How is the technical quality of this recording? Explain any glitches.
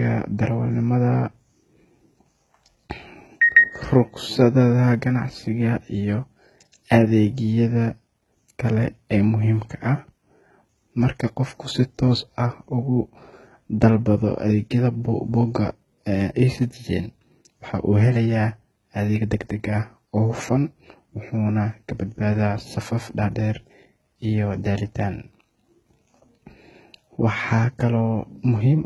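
The recording has one fault that runs through the whole speech clip, from start to finish: the sound of heavy HE-AAC compression, most likely at a very low bitrate around 16 kbps. Only the lower spectrum is truly encoded. The treble is rebuilt by copying lower bands upward under a coarse envelope, so it stays bright but no longer matches the real harmonics. S sounds come out gritty and lispy, with nothing above 11.8 kHz. A plain low-pass or low-rate MP3 would leave the top dull and smeared instead.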